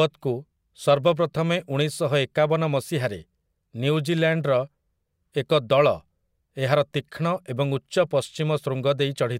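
Speech with clock slip clicks from 0.11 to 9.39 s: soft ticks about every 0.05 s, likely unsynchronised clocks differing by roughly 500 ppm.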